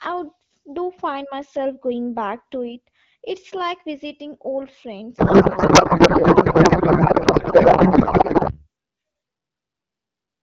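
Speech over an AMR wideband (HD Voice) link, with a codec payload misread from 5.17 s to 8.63 s. Before that the voice comes through clear, just lightly coded, which fits a rate of 12.65 kbit/s or so. In that window the speech turns into garbled noise and warble that barely tracks it. That's the sign of the two ends disagreeing on packing: AMR frames sent octet-aligned but unpacked as bandwidth-efficient, so every field lands in the wrong spot.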